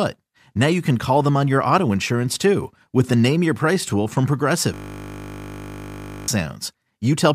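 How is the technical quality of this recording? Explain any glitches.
The speech is marred by one serious glitch. From 4.74 to 6.28 s, a system hang loop occurs. The machine froze while the audio hardware kept replaying one 20 ms buffer. That loop repeats at 50 Hz, producing a steady buzz. About a second and a half of speech is lost.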